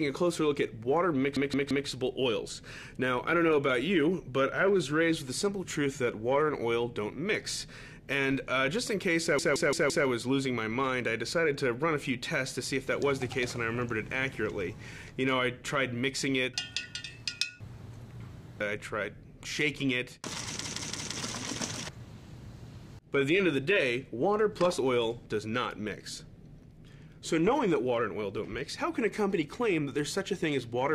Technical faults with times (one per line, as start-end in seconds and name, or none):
1.37-1.88 repeated buffer
9.39-10.07 repeated buffer
20.65-21.16 repeated buffer